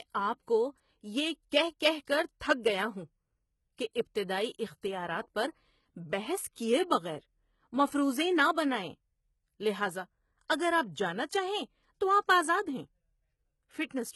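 HE-AAC compression runs through the whole speech clip, with heavy damage from start to finish. Nothing survives above 11.8 kHz. The treble is likely rebuilt by spectral band replication from lower bands, so s sounds turn gritty and lispy, which fits a bitrate near 16 kbps.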